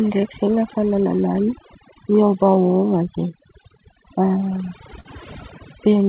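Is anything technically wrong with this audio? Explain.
Yes, there are several faults in this speech clip, which comes through a narrowband call path with nothing above 4 kHz.

Overdone noise removal runs throughout. The suppressor pushes any frequency band near its noise estimate far down, taking quiet parts of the speech with it. The background drops and breaks up into twinkling specks. Plain hiss or a simple band limit would not leave those isolated sparkles.

Clock drift between sender and receiver is also present throughout. The sender's clock runs roughly 4% slow, so the receiver's jitter buffer keeps draining instead of holding steady. That pushes playback to fall behind over the whole clip. This differs from a single glitch because the strain is continuous and all in one direction.

Repeated timing corrections run from 0.21 to 5.91 s, with playback effectively at 97% speed. The receiver repeatedly stretches short pieces to cover the slow sender, adding roughly a fifth of a second in total. 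Each edit is small. Unlike a stall, nothing is held still.

A short stall from a late packet occurs at 5.00 to 5.07 s. A packet arrived late, the buffer ran empty, and the receiver held the last sound for 43 ms before resuming where it left off. Nothing is missing, but one sound lingers with a slight buzz or dip, unlike a dropout, which leaves a gap.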